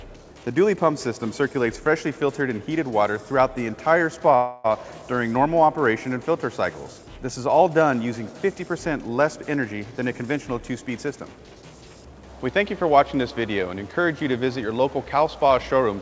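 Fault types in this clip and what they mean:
Call audio freeze: Between 4.36 and 4.66 s the sound stalls, and for about 0.28 s the last bit of audio is stretched out as a buzzy, fading hiss that never quite drops to silence. It's likely that packets were held up and the jitter buffer ran dry, so the receiver improvised until they arrived. Then the audio picks up right where it left off, so nothing is lost, it's just pushed about 0.28 s later.
Jitter buffer speed-up: Twice the audio rushes forward with no change in pitch: from 9.50 to 9.85 s at about 110% speed, and from 10.90 to 11.77 s at about 113%. The buffer had built up more delay than it wanted, so it trimmed out tiny pitch-period-sized slivers one after another. That's roughly 40 ms gone in the first stretch and around 150 ms in the second, which is why those moments sound hurried.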